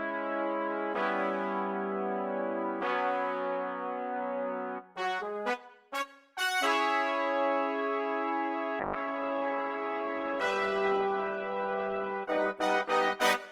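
The audio shows a call bitrate drop starting at 8.81 s and continuing to the end. The sound there becomes coarse and watery, with the top end noticeably dulled, and it stays at its worst for about 3.6 s. The loss of clarity is consistent with the encoder being pushed from roughly 128 kbps down to around 15 kbps after the bandwidth estimate fell, forcing rougher quantisation and a lowered cut-off for high frequencies.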